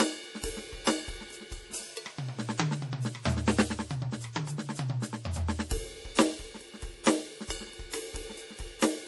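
Throughout the music the treble stops dead at about 11.5 kHz, and a plainly audible watery swirl runs through the sound. This is likely MP3 compression at a bitrate near 48 kbps, where the encoder discards the top band and lets weak frequency lines flicker between frames.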